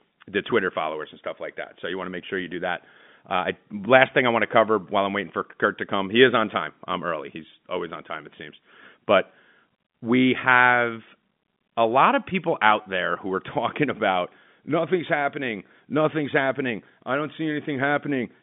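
No technical faults can be heard in this telephone-band speech.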